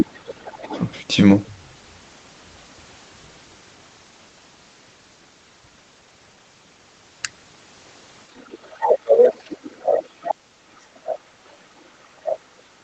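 A second voice sits under the talker from 0.0 to 0.06 s, at nearly the same loudness, about 5 dB down. It returns faintly from 0.48 to 0.81 s, at about 25 dB down. This is the other side's voice leaking through. The far end was playing on a loudspeaker and was picked up by the microphone, and the echo canceller was likely not removing all of it.

Between 0.13 and 0.76 s the talker's own voice dips sharply, by as much as about 35 dB, across most of that stretch. This is speech suppressed in double talk. With both sides sounding at once, the canceller likely treated the talker as echo and pulled the whole signal down.

From 8.37 to 8.97 s the leak comes back very faintly, at about 30 dB down. From 8.7 s to the end at about 12.83 s the talker is suppressed again, with the deepest dips around 40 dB. During that span short scraps of the far-end voice break through at about 15 dB down, at 10.28–10.34 s, 11.07–11.19 s and 12.30–12.38 s.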